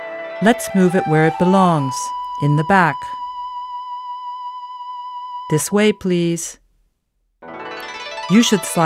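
No technical faults are audible.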